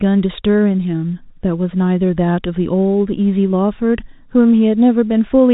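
Nothing stood out on listening to this speech recording, which carries the usual narrow telephone band of G.711 A-law coding, with nothing heard above about 3.8 kHz.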